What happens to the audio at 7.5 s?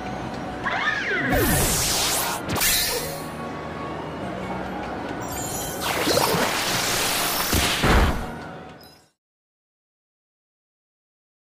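At 7.5 s the audio is intact, with no dropout, click or other fault.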